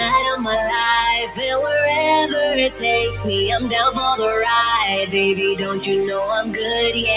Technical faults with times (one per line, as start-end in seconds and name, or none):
0.00-7.16 noise suppressor applied to music or sounds
1.26-1.43 sound cut by the noise suppressor